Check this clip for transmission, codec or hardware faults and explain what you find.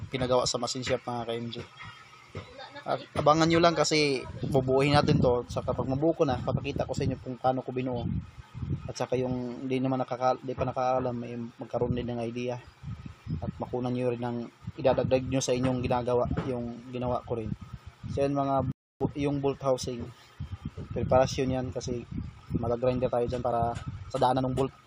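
Two faults are audible. A rebuffering stall at 18.72–19.01 s: playback ran short of downloaded data and paused, inserting 288 ms of silence before resuming exactly where it stopped. A time-stretched section from 22.01 s to the end, running about 1.46 times faster at unchanged pitch, sounds rushed. It was likely squeezed to fit a length by dropping short pieces.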